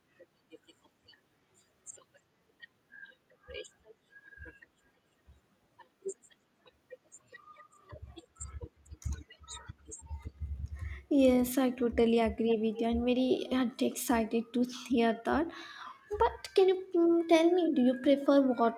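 Speech with two short bursts of echo leak, 12.49–12.56 s and 12.73–12.82 s: a faint copy well below the voice arrives 292 ms late, likely from loudspeaker pickup an echo canceller failed to remove.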